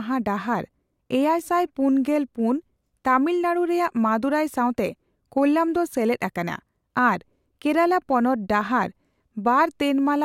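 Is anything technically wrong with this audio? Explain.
No, nothing in this recording shows a technical fault; the signal stays steady and intact throughout.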